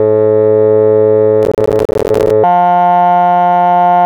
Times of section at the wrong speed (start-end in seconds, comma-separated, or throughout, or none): 2.44-4.06